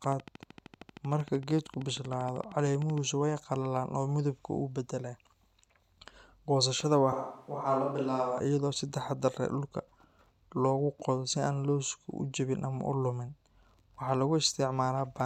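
A train of clicks runs from 0.04 s to 2.99 s, ending just before "way qallalaan oo". About forty near-identical pulses arrive at a regular 12.9 per second, peaking at about the same level as the speech, so they tick steadily over the voice and through its gaps. A steady repeating pulse like this is likely interference from nearby equipment or a faulty connection or power supply injecting the same spike over and over.

A switch to a distant microphone occurs between 7.13 s and 8.40 s, just before "iyadoo si taxaddar leh". The voice abruptly turns roomy and hollow, loses bass, drops by roughly 5 dB, and picks up background noise sitting around 35 dB below the speech. At 8.40 s it snaps back to the close sound. This is likely the close microphone's signal dropping out, leaving a farther pickup such as a camera microphone to carry the recording.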